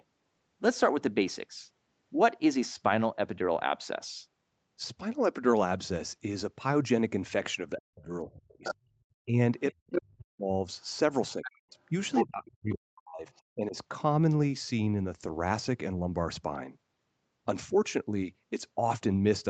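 From 7.79 to 10.52 s the talker's speech keeps getting pushed down, in pieces adding up to about a second and a half, with the deepest dips around 40 dB. That's speech suppressed in double talk, likely an echo canceller that couldn't tell the near talker from the loudspeaker signal while both sides were active, so it clamped everything. The same thing happens again from 11.36 to 13.76 s, with similar depth and total duration.

In and around those stretches you also hear the other side's voice leaking through. The scraps at 8.4 to 8.75 s and around 9.92 to 10.0 s sit roughly 5 dB under the talker. A longer run from 10.81 to 11.52 s is quieter, about 15 dB down. At 12.14 to 12.5 s the leak is about as loud as the talker. The one at 13.35 to 13.42 s is barely there, far below the speech. This is likely residual echo that the canceller failed to remove from the microphone signal. The whole clip tops out near 8 kHz from the Opus call path.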